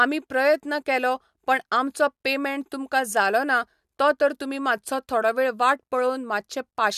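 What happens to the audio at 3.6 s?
Nothing goes wrong at 3.6 s; the speech runs through that point intact, with no dropout, click or distortion.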